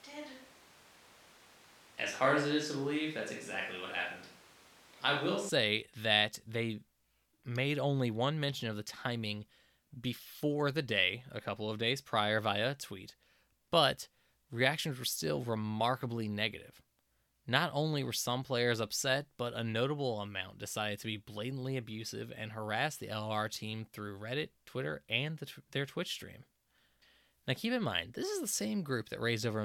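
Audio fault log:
0.00–5.49 s, switch to a distant microphone. Speech sounds roomy, hollow and thin, with room noise about 25 dB below. Likely a farther microphone, until an abrupt change back.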